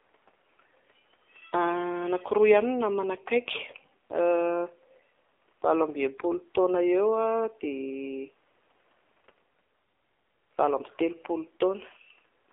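From start to finish the speech passes through an AMR narrowband mobile codec, squeezed into a 300 Hz to 3.6 kHz telephone band and coded at a low rate that fits the 7.4 kbps mode. The voice sounds plainly buzzy and synthetic, and the faint room noise, about 39 dB down, takes on a swirling warble.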